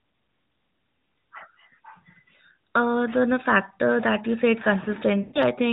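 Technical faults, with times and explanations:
5.22–5.41 s, lost AMR speech frames: the sound stretches out and fades toward silence, then returns weak and rough for a moment before steadying. Radio errors cause speech frames to fail their checksum, so the decoder keeps repeating the last good pitch and vocal tract settings at falling gain. About 120 ms of audio is missing, which fits a run of six 20 ms frames, within the narrowband AMR stream.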